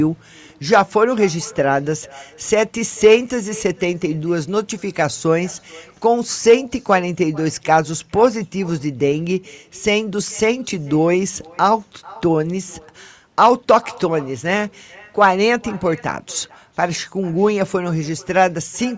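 With no echo canceller on the far end, its loudspeaker feeds back into the microphone, so throughout the speech a thin copy trails each phrase by roughly 400 ms, about 24 dB down.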